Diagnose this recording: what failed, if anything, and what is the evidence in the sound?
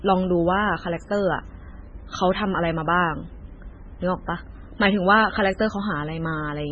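MP3 compression damage runs through the whole recording, a codec-stage fault. The speech has nothing above about 8.1 kHz, and the remaining sound is heavily degraded, watery and swirly, with sibilants turning metallic and consonant onsets smeared. This is likely a starved MP3 encoder, consistent with a very low bitrate around 16 kbps. With so few bits, the encoder cut the treble at a fixed frequency and zeroed weak spectral lines that flicker between frames.

A drift correction step occurs from 4.26 to 4.86 s, at the driver or buffer stage. For that 0.6 s the speech runs about 5.7% off speed and its pitch moves by roughly 95 cents, nearly a semitone, before snapping back. Speed and pitch shifting together in one abrupt step points to a likely clock-matching resampler that briefly changed the playback rate to refill or drain its buffer, then restored the nominal rate.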